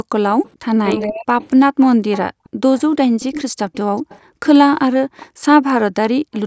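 At 0.03 to 0.14 s the background is gated by the echo canceller: room sound drops by about 40 dB for roughly a tenth of a second while the far end plays. From 0.44 to 5.26 s a delayed copy of the speech trails by 423 ms, roughly 15 dB down, likely an echo leak through an incompletely cancelled loudspeaker path. Between 0.61 and 1.38 s the near talker dips sharply, some half a second in all, consistent with speech suppressed in double talk. Background gating returns at 1.98 to 2.6 s and across 4.21 to 6.33 s, each time dropping room sound by about 40 dB. A faint echo leak, about 30 dB down and 423 ms late, reappears at 6.33 to 6.4 s.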